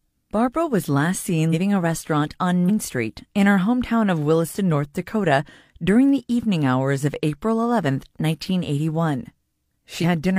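Brief jumps where the speech lurches forward by about a tenth of a second, at 1.49–1.54 s between "was last" and "a restaurant on", at 2.65–2.70 s after "a restaurant on", and at 9.99–10.04 s. These are compressed frames skipped: about two 46.4 ms frames are dropped each time.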